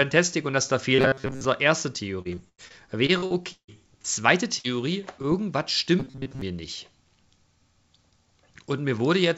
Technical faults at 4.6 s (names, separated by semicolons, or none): burst of packet loss